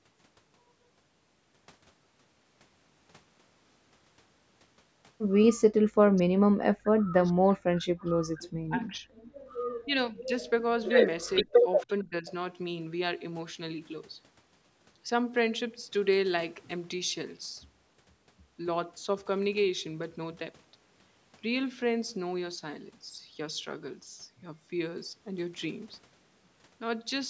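A speech recording made through call microphone processing, with nothing above 8 kHz, that shows speech suppressed in double talk in five places: 5.91 to 7.89 s, 8.05 to 9.1 s, 9.85 to 10.34 s, 11.4 to 11.56 s and 11.86 to 12.27 s. The voice dips, thins or breaks into pieces, by roughly 40 dB at its worst in the first and fourth stretches, about 30 dB in the second and around 15 dB in the others. The likely cause is an echo canceller that heard the far side talking at the same moment and could not tell its own talker from loudspeaker echo, so it pulled both down. On a waveform these show as ragged notches cut into the speech envelope. A spectrogram shows sudden dark gaps in the harmonic bands. Between 9.38 and 9.47 s the background is gated by the echo canceller. The room tone drops by about 12 dB for roughly a tenth of a second while the loudspeaker plays, then returns when the canceller releases. 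It appears as a brief dark vertical band across the noise floor on a spectrogram and as a small dip in the quiet baseline of the waveform. Two short echo leaks follow, at 11.8 to 11.86 s and 12.27 to 12.32 s. Each is a faint scrap of voice about 25 dB below the speech, arriving 458 ms after its source. Each is probably residual loudspeaker pickup the canceller failed to remove and sent back. On a spectrogram they look like faint, smeared copies of earlier harmonic patterns, and on the waveform like low blips sitting next to the suppressed gaps.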